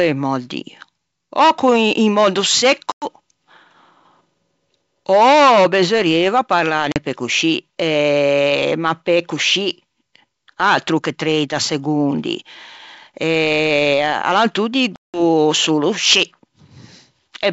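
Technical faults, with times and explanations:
2.92–3.07 s, 6.92–6.97 s and 14.96–15.21 s, packet loss on an ADPCM call: sharp-edged silent gaps of about 100, 40 and 180 ms where packets went missing. Afterward the receiver's adaptive predictor and step size are out of step with the sender's, so speech comes back with brief slight distortion before settling.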